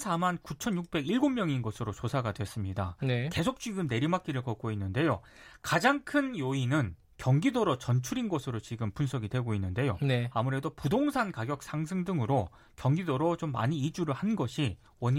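No technical faults are audible.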